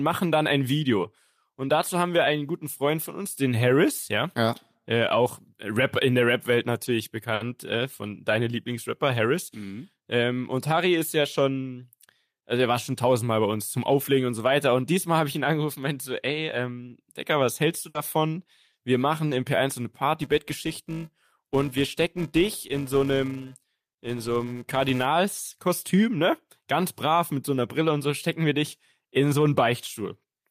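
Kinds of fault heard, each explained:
Short stall from a late packet: At 7.34 s a packet arrived late. The sound is held for 60 ms, nothing is lost, and everything after runs 60 ms later.
Burst of packet loss: At 17.89 s packets were lost. A fading continuation fills 60 ms, then the sound resumes with 60 ms skipped.
Filter restarted on every block: From 20.22 to 25.05 s, a 375 Hz buzz follows the level, consistent with a filter resetting every 128-sample block.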